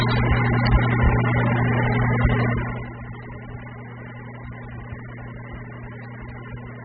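A short sound recording, dull and smeared throughout, with a fizzy, warbling texture and nothing above about 4.7 kHz, likely from AAC compression at a very low bitrate, consistent with around 8 kbps AAC-LC. From 2.46 to 2.98 s a fine ticking zipper noise rides on the sound as the level drops roughly 15 dB in audible 1 dB steps, about fifty a second, with no smoothing between them.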